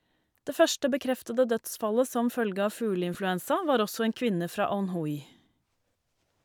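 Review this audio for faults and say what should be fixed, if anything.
At 3.14 s, right after "dødsfallet som følge av" and before "var også en kvinne", there's a brief lost LE Audio frames glitch. The LC3 decoder filled a roughly 10 ms gap by reusing the previous spectrum with scrambled signs, which fits a single dropped frame. To prevent it, improve the Bluetooth link margin by cutting interference, shortening the distance, or adding retransmission headroom.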